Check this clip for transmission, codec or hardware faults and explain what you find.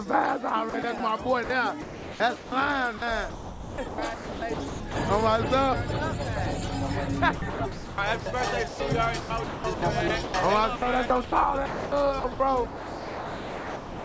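Yes, there is one kind of fault, sound chopped by the voice detector, heard twice through a call path whose G.722 coding leaves nothing above 8 kHz.

From 0.70 to 4.96 s and from 7.36 s to the end, the sender's voice detector likely toggled transmission repeatedly, swapping about 1.8 s and 3.05 s of real audio for comfort noise. The sound turns choppy. A spectrogram shows abrupt, smooth, featureless noise patches, and the waveform shows flattened low-level gaps.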